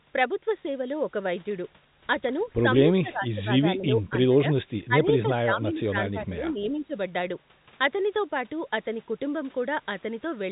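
Likely mistaking both sides talking at once for echo, the echo canceller causes speech suppressed in double talk: the voice drops by about 20 dB from 3.01 to 4.3 s and by about 15 dB from 4.88 to 6.94 s.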